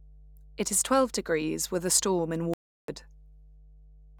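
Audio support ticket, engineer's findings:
Mains hum: steady 50 Hz tone under the speech, about 25 dB below signal, present start to end. Probable component: ground loop or nearby transformer coupling line frequency into the input. Distinct from rumble or handling noise: fixed pitch, constant level, no variation with speech.

Audio dropout to silence: 2.54 to 2.88 s (0.35 s), right after "with a storm in". Input likely lost (disconnect, failed link or stray mute) while the recorder kept writing silence. Distinct from a noise gate or edit: gap is silent, no room tone, abrupt cut and resume mid-flow. Speech in that span unrecoverable.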